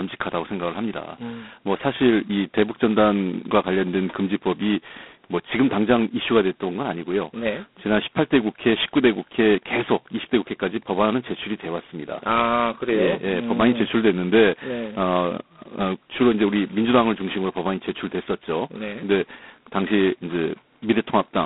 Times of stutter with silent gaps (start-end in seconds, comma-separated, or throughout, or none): none